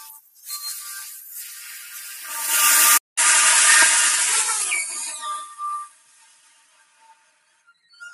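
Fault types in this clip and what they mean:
Noise suppressor applied to music or sounds: A speech-oriented noise suppressor stayed active across the whole clip, treating steady parts and tails as noise. Its gain keeps swinging by around 20 dB, so sustained sound sinks and recovers, pumping and thinning while sharp onsets mostly get through.
Sound cut by the noise suppressor: At moments the suppressor judged the sound itself to be noise and clamped it harder. From 0 to 0.46 s the level dips by about 10 dB, and from 5.87 to 7.84 s by about 13 dB, leaving held and fading sound hollowed out.
Input switched to a poorer device: At 2.98 s the capture most likely changed to a lesser input device. A 200 ms silence marks the switch. Afterwards the narrower band makes the sound duller, with a faint new noise floor and no real change in level.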